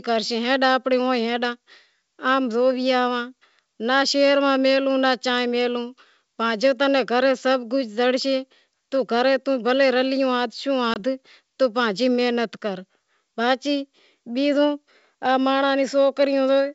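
Right around 10.94 to 10.97 s there's a packet loss on what sounds like an ADPCM call, with a single packet gone and a hard-edged silent gap of about 20 ms filled in. The decoder's predictor and step size drift out of step with the sender's, so the speech comes back with a brief, slightly rough stretch before it settles. The G.722 wideband coding at 64 kbit/s carries the audio up to about 7 kHz.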